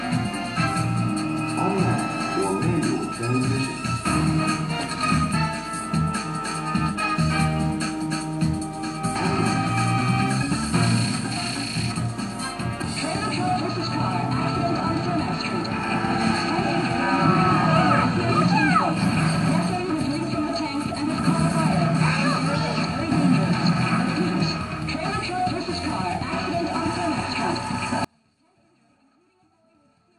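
The audio has an abrupt dropout to a faint residue at 28.05 s, lasting to the end. The sound cuts out mid-flow, not as a pause or fade. Only a faint trace remains, roughly 35 dB below normal. The likely cause is the source being lost while the path after the break stayed live.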